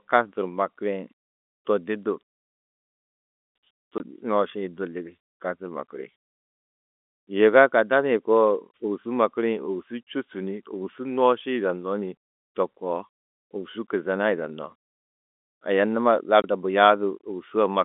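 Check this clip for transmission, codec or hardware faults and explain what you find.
The clip has two short dropouts of the same kind on an otherwise narrowband telephone line whose 250 Hz to 3.6 kHz band fits normal G.711 coding.

Packet loss filled with silence, at 3.98 to 4.00 s and 16.42 to 16.44 s: each 20 ms gap, which fits a single lost packet, was replaced with digital silence, so the speech cuts out abruptly with hard edges.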